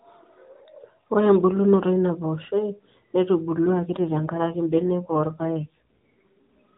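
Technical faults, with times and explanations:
3.58–6.45 s: AMR rate drop. The speech turns rougher, buzzier and more synthetic, which fits the mobile link stepping the AMR codec down from about 12.2 kbps to around 5.9 kbps and spending the freed bits on error protection. Fewer bits leave the vocal-tract model with fewer excitation pulses. The band stays capped at 4 kHz throughout, as AMR narrowband always is, and the waveform shows no gap. On a spectrogram, harmonics look smeared and grainier.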